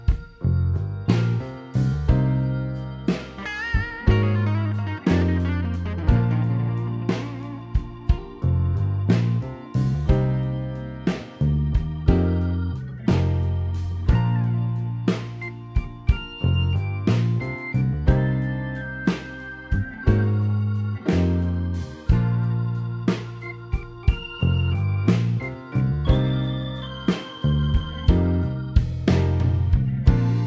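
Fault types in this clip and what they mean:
Listening through the clip, nothing stood out as a technical problem.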